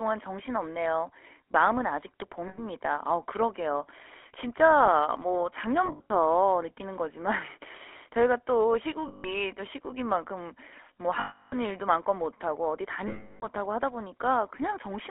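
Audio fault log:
throughout: GSM full-rate codec. Speech is confined to roughly 300 Hz to 3.4 kHz, with plainly audible buzzy, gravelly roughness from pulse-driven vocal-tract modelling that fits 13 kbps full-rate coding.
2.48–2.63 s, 5.86–6.11 s, 9.08–9.31 s, 11.2–11.57 s, 13.08–13.45 s: lost GSM frames. Missing stretches of about 100, 140, 160, 320 and 340 ms are each filled by repeating the last good frame, heard as a rough metallic ring. At 5.86 s the losses are scattered over about 240 ms, in runs of about 70 ms at most.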